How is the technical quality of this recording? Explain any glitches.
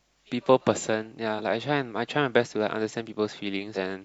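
The speech has two brief glitches caused by damaged data in a compressed stream, at 1.35 to 1.41 s and 3.72 to 3.77 s. In each, some bytes of the encoded file were wrong, so the decoder misread those frames and had to resynchronise on a later frame header. The result is a disturbance of about 50 to 60 ms, heard as a chirp, squawk, click or short hole.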